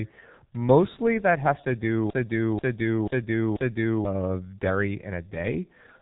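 Throughout, the speech sounds muffled and hoarse, with smeared consonants and nothing above 3.8 kHz, which points to heavy G.723.1 codec damage at around 6.3 kbit/s. From 2.10 to 4.05 s, a broken-record loop repeats a 0.49 s fragment four times back to back, likely because the stream stalled and resent its last fragment, so the audio for that stretch is lost.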